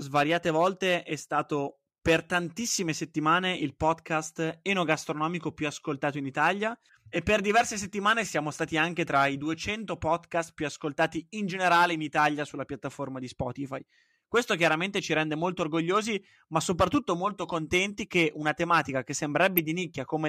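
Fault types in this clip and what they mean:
DAB burbling: at 19.58 s, bit errors from weak reception slip past error correction into the MP2 audio data, leaving brief noise blips in individual sub-bands.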